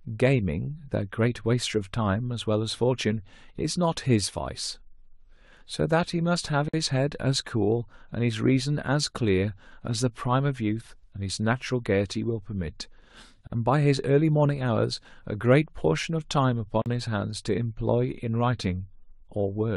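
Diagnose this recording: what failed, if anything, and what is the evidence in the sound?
The speech drops out abruptly three times: a 51 ms silence at 6.69 to 6.74 s, 44.5 ms at 13.47 to 13.52 s, and 41.6 ms at 16.82 to 16.86 s. Each hole has smeared edges and resumes exactly where it stopped. This is a gap at a join of encoded pieces, a codec-stage fault. Separately encoded segments were concatenated untrimmed, so each segment's encoder start-up delay and final-frame padding remain as dead air.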